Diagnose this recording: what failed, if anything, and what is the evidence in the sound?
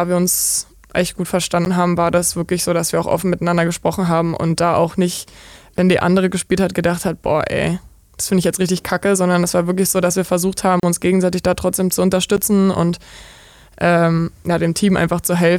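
The failure is in the driver or buffer stage. There are four blocks of digital silence. The first is at 1.65 s, after "wir uns echt gut". The second is at 5.77 s. The third runs from 10.80 to 10.83 s, after "so dass wir versucht". The fourth is at 12.37 s, after "gegenseitig da trotzdem zu". Three gaps last 11.6 ms, which fits a 512-sample buffer. The 34.8 ms gap fits three of them. The output buffer went unfilled, so the speech cuts out with no fade.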